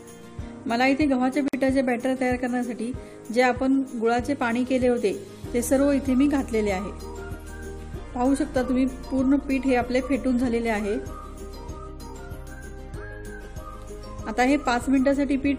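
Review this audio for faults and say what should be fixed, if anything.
Separately encoded pieces were joined without trimming each run's start-up delay and last-frame padding, leaving a gap at a join of encoded pieces: a silence of about 53 ms from 1.48 to 1.53 s, with smeared edges, before the sound resumes where it stopped. Trim encoder delay and padding, or encode gaplessly, before joining.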